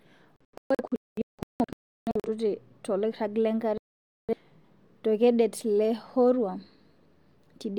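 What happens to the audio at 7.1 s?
Nothing goes wrong at 7.1 s: the speech there plays through cleanly, without any dropout, click, distortion or other fault.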